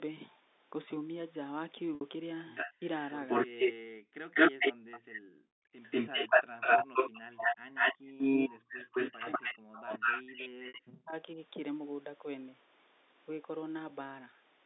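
At 1.95 to 2.01 s there is packet loss with pitch repetition. About 60 ms of audio is missing, which fits two lost packets. The receiver filled the gap by repeating the last pitch period, so the sound briefly holds on a steady, slightly buzzy tone instead of breaking into silence. It then blends back into the live signal.

From 2.47 to 3.73 s there is an echo leak. A copy of the far-end speech arrives 193 ms late, about 10 dB below the main speech. The likely cause is a loudspeaker at the far side whose echo canceller did not fully remove what its microphone picked up and sent back.

At 3.73 to 3.82 s the background is gated by the echo canceller. The room sound drops by up to about 40 dB for roughly 100 ms and then returns. The canceller clamped the microphone hard as the echo ended and released it a moment later.

From 4.1 to 7.49 s the speech is suppressed in double talk. The talker's level dips by as much as about 40 dB over roughly 3 s in total. 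This is likely the echo canceller attenuating its own talker while the other side was also speaking. Within this span, at 4.34 to 5.2 s, the 193 ms echo leaks through again, here about 15 dB below the speech.

From 5.83 to 10.92 s a longer echo leak runs at the same 193 ms delay and about 10 dB down.

At 7.98 to 8.15 s the background is gated by the echo canceller once more, dropping by up to about 38 dB for roughly 150 ms before it comes back.

From 8.36 to 11.38 s there is a second period of speech suppressed in double talk, totalling about 2 s of dips of up to roughly 40 dB. Inside it, at 10.68 to 10.74 s, a second packet loss with pitch repetition covers another 60 ms gap with the same brief held, buzzy tone.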